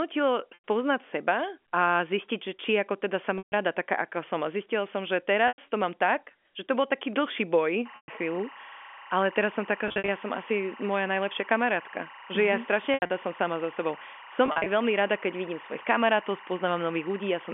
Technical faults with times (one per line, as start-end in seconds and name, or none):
0.54-0.62 packet loss with pitch repetition
3.38-3.52 packet loss with pitch repetition
5.48-5.58 packet loss with pitch repetition
7.86-17.54 timecode bleed
7.96-8.08 packet loss with pitch repetition
9.88-10.08 packet loss with pitch repetition
12.94-13.10 packet loss with pitch repetition
14.46-14.66 packet loss with pitch repetition